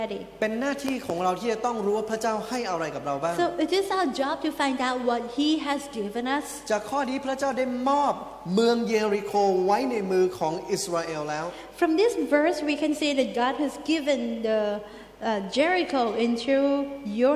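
Nothing stood out as a technical fault when listening to this recording.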